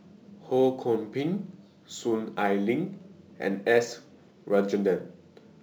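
A speech recording affected throughout by sample clock jitter: the converter's clock wanders by a few microseconds, so samples land early or late, adding a fine hiss and roughness about 35 dB below the speech that grows on loud, bright sounds and disappears in pauses.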